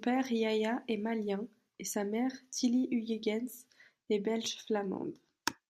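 Nothing stood out on listening through this speech recording.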